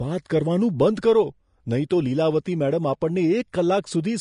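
From start to end, the speech carries the sound of Vorbis compression, the likely cause of what is heard. Nothing comes through above 10.5 kHz, and the treble below that edge is quantised so coarsely that its fine detail turns to hiss of similar energy, leaving sibilants grainy and consonant attacks blurred. The damage is plainly audible and fits a bitrate around 34 kbps. Unlike a plain low-pass filter, the remaining treble is noisy, not cleanly dulled.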